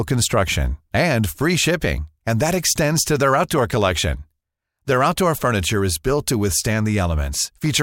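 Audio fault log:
No faults found in the speech recording; nothing to log.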